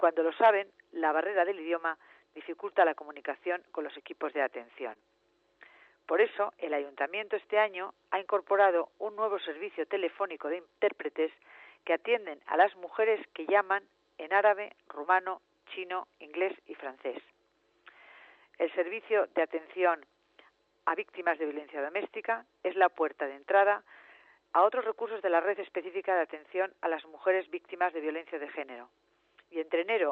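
Audio sent over a WebRTC-style call path has a short concealed packet loss at 4.93 to 4.97 s. About 20 ms of audio never reached the decoder in time, and the receiver covered roughly 18 ms of that gap by extending the preceding sound before crossfading back into the real signal. The result is a brief smear or wobble where a very short sound may drop out. The codec's band limit, consistent with a cut-off near 8 kHz, can be heard throughout.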